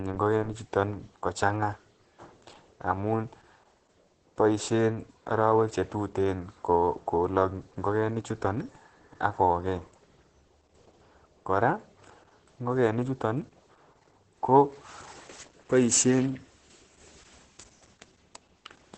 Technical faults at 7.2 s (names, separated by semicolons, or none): Opus voice compression